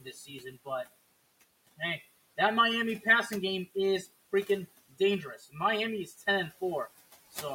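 From start to end, channel delay (comb filtering): one channel trails by roughly 5 ms, and the mono sum leaves the speech hollow, with fixed notches starting near 100 Hz as evenly spaced dark horizontal bands on a spectrogram. Throughout, noise suppressor artifacts push the room noise, sitting about 20 dB under the speech, down by about 18 dB between phrases, so it pumps, visible as flickering speckles in the quiet gaps. Speech cut by the noise suppressor appears from 0.01 to 0.45 s (about 11 dB, roughly a third of a second), 5.38 to 5.56 s (about 16 dB) and 6.06 to 6.22 s (about 9 dB), with faint, swallowed syllables showing as sudden dips in the waveform envelope.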